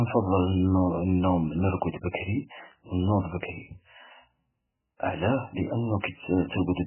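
Throughout the speech, the sound is watery and swirling, with nothing above 3 kHz and smeared consonant onsets, which points to a very low bitrate near 8 kbps, likely heavy MP3 compression. A spectrogram shows a hard ceiling at 3 kHz and patchy, flickering blocks below it.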